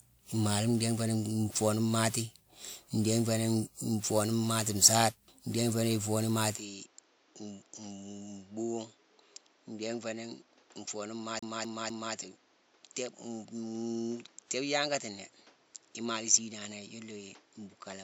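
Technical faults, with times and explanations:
Throughout: generation loss, likely from about ten passes through WMA 1 at 128 kbit/s, so swirling, hollow, smeared speech with blurred attacks.
6.56 to 18.04 s: input switched to a poorer device, likely a lesser microphone; the sound turns dull, nothing above 7.6 kHz, about 10 dB quieter, with new background noise.
11.39 to 12.15 s: CD stuck on one turn, the same 0.25 s of speech replaying three times with a brief mute at each jump, an even stutter.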